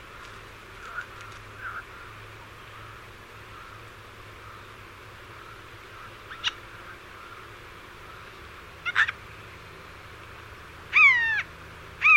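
No technical faults can be heard anywhere in this audio.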